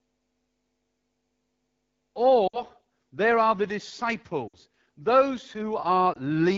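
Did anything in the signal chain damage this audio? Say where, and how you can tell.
Yes, two kinds of damage, both from a mobile voice link. The first is at the codec stage: the whole clip carries the AMR wideband (HD Voice) codec at a very low rate. The speech sounds rough and raspy, with a grainy, buzzy edge and a hissy top end. That fits one of AMR-WB's lowest modes, around 8.85 kbit/s. At that rate the pulse excitation is too coarse to model the voice cleanly, and the band above 6.4 kHz is just shaped noise.

The second is on the network side: lost AMR speech frames. From 2.47 to 2.62 s, just before "there are the", the sound drops to near silence, then comes back a bit rough. The same thing happens from 4.47 to 4.56 s, and a shorter dip at 6.13 to 6.18 s. The first two sound like about 60 ms gone, roughly three frames each, and the last like a single 20 ms frame. The decoder papered over the missing frames by repeating the last good settings with falling gain.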